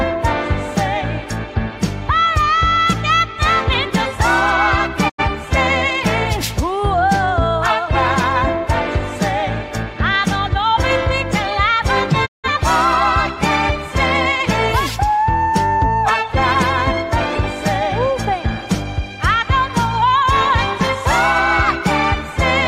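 At 5.08 s the sound fades out over about 20 ms and stays silent until 5.23 s. At 12.25 s the same digital broadcast dropout occurs again, a longer hole lasting until 12.49 s. In each case the receiver stopped getting valid frames and muted rather than playing corrupted data. The gaps fit roughly two and four lost frames. It differs from packet-loss concealment in that nothing fills the hole and no fragment repeats. The muted audio is simply gone and resumes later in the programme.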